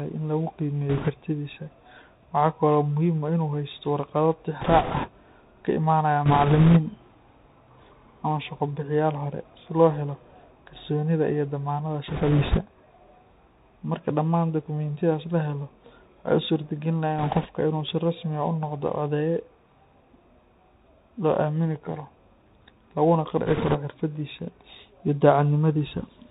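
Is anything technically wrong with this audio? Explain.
Yes. The whole speech clip has gone through a Bluetooth CVSD headset codec. Nothing above 4 kHz survives. Each sample is coded as a single up-or-down step whose size adapts, which fits a 64 kbps CVSD link. When the speech rises quickly the step cannot keep up, so s sounds turn scratchy over a granular hiss. That constant grain sets it apart from a simple low-pass band limit, which would sound dull but clean.

There are also bit errors on a Bluetooth voice link at 0.89 to 1.09 s, 4.61 to 5.08 s, 6.26 to 6.80 s, 12.08 to 12.61 s, 17.18 to 17.48 s and 23.46 to 23.78 s. A few percent of the bits are flipped. In CVSD every bit carries the same small weight and errors fade out, so these stretches get a rushing, crackly noise instead of sharp clicks or dropouts. That is unlike packet loss in frame-based codecs.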